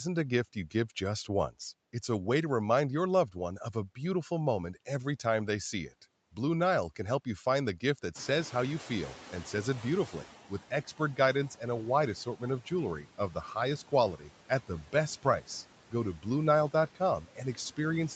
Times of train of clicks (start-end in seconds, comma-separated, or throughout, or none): none